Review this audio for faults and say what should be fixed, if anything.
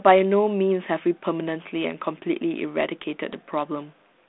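Nothing stood out on listening to this speech recording, so there is nothing to fix.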